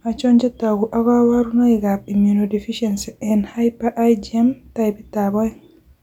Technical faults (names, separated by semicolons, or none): none